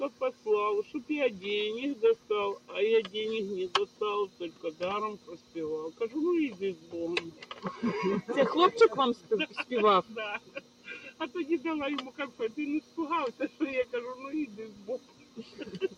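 A noise suppressor made for speech is running on this material the whole way through. It treats sustained, steady parts as noise, so level keeps swinging by around 10 dB, with held sounds and tails sinking while attacks get through, giving a pumping, thinned feel.

You can hear the sound cut by the noise suppressor at 0.1–1.1, 2.16–3.13, 3.86–6.01, 6.75–7.64, 9.15–11.2, 12.11–13.93 and 14.49 s to the end. Each time, steady or decaying stretches dip by about 10 dB.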